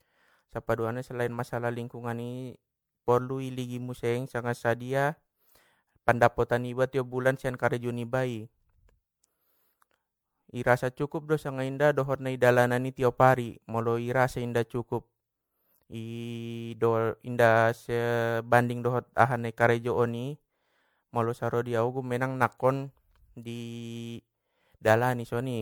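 From start to finish the speech has a swirly, hollow, smeared quality with softened attacks. That's generation loss, likely from being run through an MP3 encoder around 96 kbit/s about five times over, each pass requantising on a shifted frame grid and stacking up noise and spectral holes.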